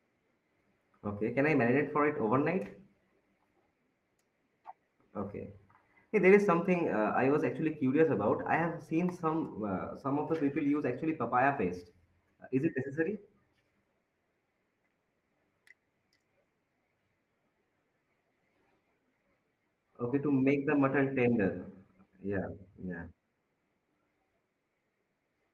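No technical faults can be heard in this speech recording. The Opus voice compression leaves only a light coding texture, and the full audio band comes through in the hybrid mode.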